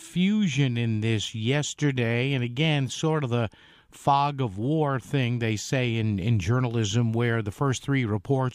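There are no technical faults to describe at any point in the clip.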